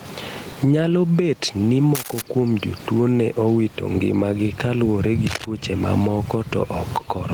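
Gain pumping runs through the whole speech clip. The level appears to swing by around 20 dB, bringing loud and soft parts closer together so the speech sounds squashed. The likely cause is input gain set far too high, with a fast limiter pulling it down on each peak. This is different from a noisy room. The room noise sits about 30 dB below the speech.

Cable scratch noise appears from 1.95 to 2.22 s and again from 5.27 to 5.45 s. Each time, a dense, ragged burst of scratching rides over the speech at roughly the same loudness as the speech itself. It most likely comes from a worn cable or connector being moved, so its contact resistance flickers. It differs from a single click or a dropout because it is a rough stretch lasting a few tenths of a second, and the speech continues underneath it.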